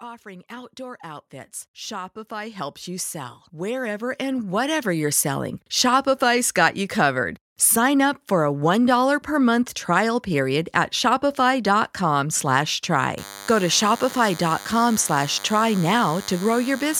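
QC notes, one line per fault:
0.05–5.32 s, automatic gain rising: the speech and the room noise behind it swell together, climbing by about 19 dB over roughly five seconds rather than settling at once. Because the background rises in step with the talker, this is not someone moving closer or speaking louder; the automatic gain control judged the input too quiet and kept raising its gain gradually.
13.18–16.99 s, DECT cordless phone buzz: a steady, thin, rasping buzz sits under the speech to the end, roughly 20 dB below it, with a fundamental at 100 Hz and a dense stack of harmonics above. A DECT handset or base station close by transmits a short radio burst every 10 ms; the audio circuitry rectifies those bursts, turning their 100 Hz repetition into an audible pulse train whose sharp edges produce the harmonics.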